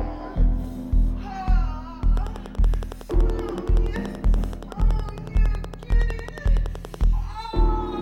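A train of clicks runs from 2.17 to 7.05 s: around fifty near-identical pulses at a regular 10.7 per second, peaking roughly 5 dB above the sound. They tick steadily through pauses as well, likely interference from nearby equipment or a faulty connection or power supply.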